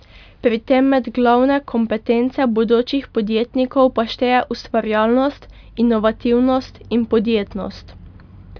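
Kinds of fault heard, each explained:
Nothing stood out on listening to the speech here.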